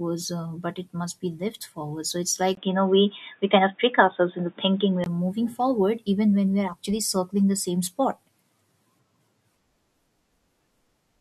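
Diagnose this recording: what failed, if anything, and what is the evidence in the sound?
Device or driver stage. After a 20 ms gap at 2.55 s, just before "moving forward even when", speech goes dull, with nothing above 3.7 kHz. The input likely switched to a poorer device. Full band returns at 5.06 s.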